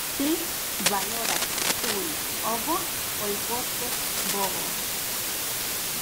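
From start to finish the speech carries low bit depth with dither: it has been reduced to 4 bits, with dither added before rounding. The rounding error becomes a constant, even hiss, roughly as loud as the speech itself, so the words sit inside a wall of noise without any gritty distortion. A spectrogram would show a flat, uniform wash across all frequencies, and the waveform a thick noise band that never drops to silence.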